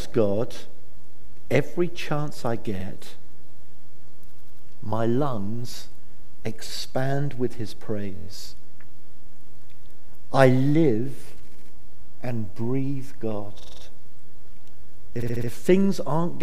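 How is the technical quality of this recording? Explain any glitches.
The recording has six short stutters. Repeated frames occur at 2.79 to 2.84 s, 4.34 to 4.62 s, 8.15 to 8.27 s, 11.50 to 11.71 s, 13.59 to 13.82 s and 15.21 to 15.49 s. Each time, a block of compressed audio between 23 and 93 ms long, which fits frames of about 23 ms, is played again one to five times. The sound stammers, and every event adds up to about 280 ms to the playing time.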